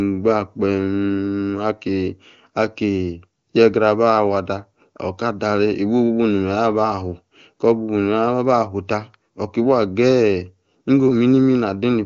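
Nothing stood out on listening to this speech recording, which carries the full, clear sound typical of wideband HD Voice at its top rate.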